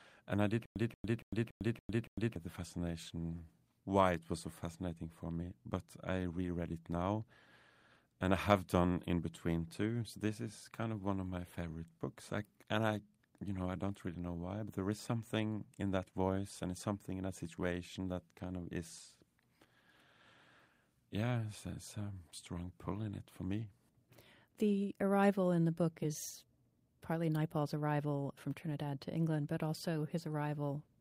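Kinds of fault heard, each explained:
Stutter with silent gaps: right after "and I", the speech catches on a short fragment of about 182 ms that plays six times at an even pace, each repeat followed by roughly 102 ms of dead digital silence, so the pattern cycles every 283 ms from 0.66 to 2.36 s before resuming at "the fascination why it". This points to a likely playback or stream stall, where each retry replayed the last buffered piece and then ran dry, losing the audio meant for that span.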